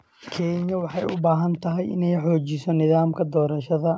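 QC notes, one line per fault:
1.02 s, microphone volume stepped up: the level jumps by about 5 dB in one step, because the call software judged the microphone too quiet and raised the device's input volume. Unlike a compressor or automatic gain riding the level, the background noise rises together with the speech and stays up, with no gradual ramp or recovery. The call path's cut-off near 8 kHz is the same on both sides of the step.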